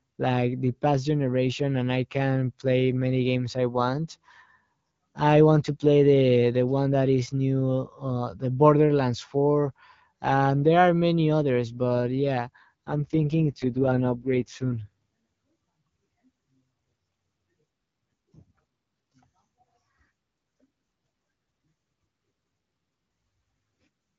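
At 12.86 s, right after "many others but yeah", an AMR rate drop lasts until 14.88 s. The AMR-WB (HD Voice) stream's codec mode falls, and the speech turns rough and raspy, which fits a switch from 12.65 to 6.6 kbit/s. Bandwidth stays unchanged and there is no gap.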